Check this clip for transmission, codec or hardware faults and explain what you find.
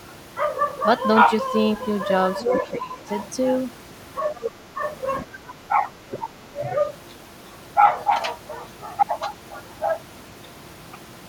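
Two echo-control faults appear in this speech, both in the first seven seconds.

Other side's voice leaking through, 2.39 to 2.7 s and 4.36 to 4.49 s: a second voice sits under the talker, roughly 5 dB below it at first, then much fainter. The likely cause is loudspeaker playback that the echo canceller left in the microphone signal.

Speech suppressed in double talk, 2.72 to 3.01 s, 4.45 to 4.81 s and 5.22 to 6.55 s: the talker's level sags by roughly 10 to 20 dB, in pieces across about a second in the last stretch. The likely cause is the canceller mistaking overlapping talk for echo and turning everything down.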